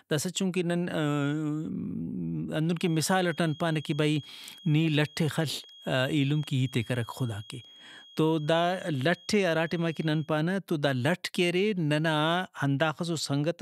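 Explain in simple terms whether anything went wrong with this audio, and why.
A thin, steady whistle sits behind the speech from about 2.72 to 10.33 seconds, pitched high at around 3.3 kHz and quite faint, well below the talking, with a slight wobble in loudness. It fades just before the words "تو دا لٹ کہ". This is a feedback whistle, likely caused by sound from a loudspeaker leaking back into the microphone and looping round, held right at the edge where one tone keeps ringing without growing into a full howl.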